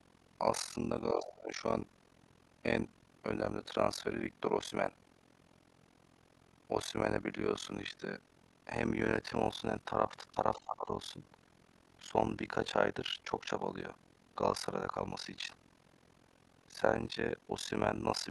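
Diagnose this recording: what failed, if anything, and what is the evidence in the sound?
Overlap-add ripple throughout: a rough flutter near 40 Hz, dipping about 60 dB each frame, so the frame-based processing reassembles windows without constant gain.

Speech suppressed in double talk at 1.14 to 1.54 s and 10.57 to 10.89 s, dropping around 20 dB: the call-processing echo canceller likely ducked the talker while both sides spoke.

Other side's voice leaking through at 1.27 to 1.33 s and 10.55 to 10.60 s, some 15 to 20 dB down: residual loudspeaker echo the canceller likely failed to remove.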